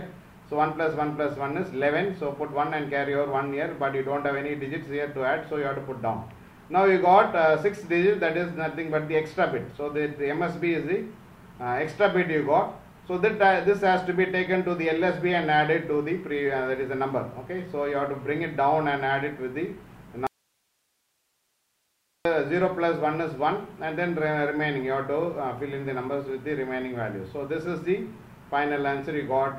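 At 20.27 s the audio drops out to a faint residue. The signal cuts off abruptly in mid-flow and stays gone until 22.25 s, a gap of just under 2 s. Nothing of the programme survives in that stretch. Only a thin hiss remains, sitting around 50 dB below the normal level. The onset and return are hard edges, not a pause or a fade. The likely cause is a brief loss of the source while the path downstream stayed live.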